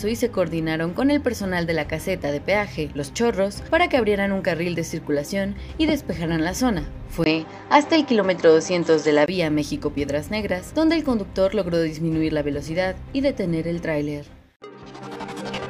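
From 7.24 s to 9.28 s the sound turns duller, losing everything above 7.9 kHz after a 20 ms gap, with the level shifting about 5 dB and a new, faint noise floor. That combination, not a bare bandwidth cut, suggests the input likely switched to a poorer device.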